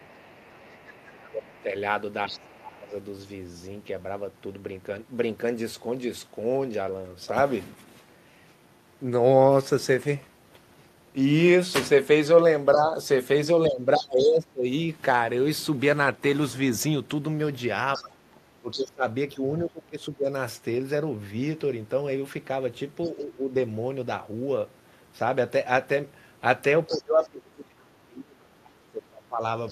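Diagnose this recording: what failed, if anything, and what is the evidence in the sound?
Other side's voice leaking through at 0.0–2.56, 13.96–14.28, 17.93–18.82, 23.04–23.11 and 26.89–29.71 s. It is faint at the start and near 23 s, and roughly 15 dB below the speech elsewhere. This is in call processing: likely loudspeaker echo that the canceller left in the microphone signal.

Speech suppressed in double talk at 0.0–2.94, 12.74–14.66, 17.97–23.55 and 26.87–29.71 s. The talker dips by about 20 to 30 dB while the far side speaks. This is also call processing: the echo canceller likely couldn't separate near speech from echo, so it attenuated both.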